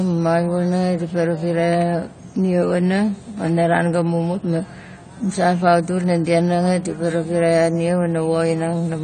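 From start to finish the speech has nothing above 9 kHz, so the top end is cut off and it sounds dull, and the codec damage is plainly audible throughout. That's likely AAC compression, AAC-LC at a low bitrate, consistent with something around 32 kbps. At that rate the encoder can't afford the upper bands, so it drops them and squeezes what's left against its hearing model, which is why the smeared, coarse texture never lets up.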